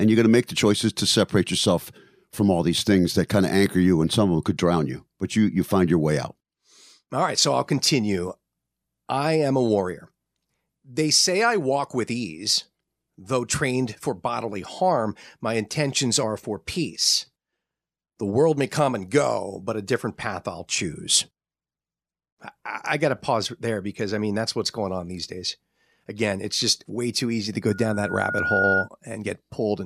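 Loudspeaker feedback squeal breaks into this speech recording from 27.67 to 28.89 s, a single tone near 1.4 kHz that swells over roughly a second until it sits about 5 dB above the speech. The microphone is hearing the loudspeaker it drives, and at that one frequency the loop gain has crept past unity, so each trip round the loop makes the tone louder and it keeps feeding itself.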